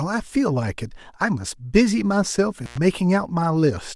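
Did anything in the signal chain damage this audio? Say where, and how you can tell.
Yes. At 2.64 to 2.78 s the speech cuts out for about 96 ms, with crackle at both edges of the gap and faint hiss while it lasts. That pattern points to an intermittent contact in the analogue wiring: a loose cable or plug briefly lost its connection, so the signal dropped to the noise floor. The crackle comes from the contact scraping as it opened and closed again.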